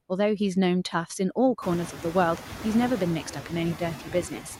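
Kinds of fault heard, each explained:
Noise suppressor artifacts: The suppressor guesses which bands hold steady noise and lowers them frame by frame, here by about 5 dB. The room noise that rises near 1.5 s therefore dips between phrases and comes back under speech. A spectrogram shows the noise floor pumping.
Speech cut by the noise suppressor: From 3.99 to 4.44 s, quieter parts of speech were taken for noise and pulled down by up to about 12 dB, roughly 150 ms in total. The waveform envelope shows brief notches, and speech energy fades toward the floor.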